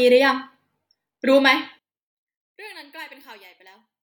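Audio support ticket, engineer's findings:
Speech drops by about 25 dB from 1.79 s to the end. Likely one channel inverted in the stereo path. Reversed polarity on one side. Content common to both channels cancels in the mono sum.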